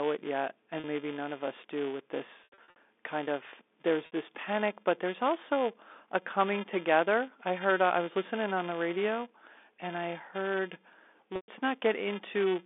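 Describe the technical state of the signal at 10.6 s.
A filter restarted on every block loses its state at each boundary through the whole clip, 10.6 s included, adding a small transient each block and a level-following 375 Hz buzz that fits a 128-sample block.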